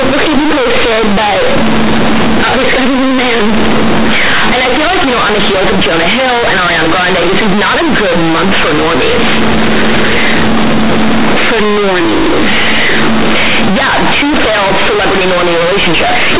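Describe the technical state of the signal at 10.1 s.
At 10.1 s the speech suffers from companded audio read as linear, present across the whole clip rather than at that moment alone. Mu-law telephone bytes are being played as linear 8-bit samples with no expansion, so every sign change throws the output across roughly half its range. Quiet passages come out as loud as stressed syllables, giving a harsh, buzzy roar with heavy noise in pauses. Ordinary clipping or overdrive leaves silences quiet; here pauses stay noisy. The band still stops at 4 kHz, from the 8 kHz G.711 coding underneath.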